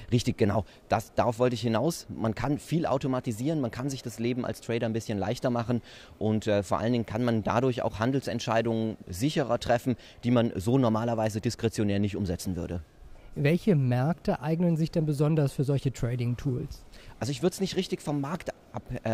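Nothing stood out on listening; no audible technical fault turned up anywhere in the audio.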